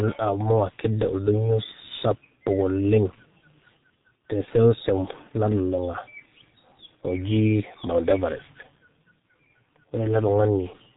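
Speech is heard through the G.723.1 codec for the whole clip, heavily damaged: nothing above 4 kHz, a muffled, hoarse tone and smeared consonants, fitting a bitrate near 6 kbit/s. Unlike a plain low-pass filter, its coarse 30 ms frames also blur transitions.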